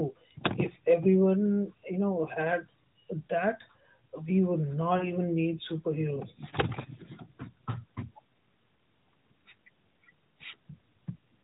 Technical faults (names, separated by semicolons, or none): lost AMR speech frames